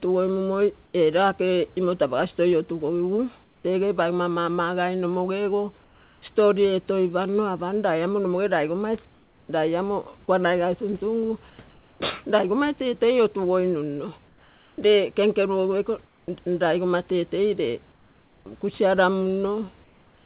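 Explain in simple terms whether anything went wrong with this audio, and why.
Comfort noise in place of the background, likely from the sender muting itself during pauses, replaces the real room sound with a flat hiss, slightly quieter in most cases, at 0.86, 3.44, 5.84, 9.14, 11.5, 14.28, 17.92 and 19.84 s.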